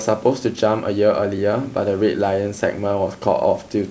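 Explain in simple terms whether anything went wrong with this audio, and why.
Nothing went wrong that I could hear in this speech recording; it simply carries the normal sound of a phone or video call, where the microphone processing trims the deepest bass and the call connection leaves nothing above about 8 kHz, and neither of those is a fault.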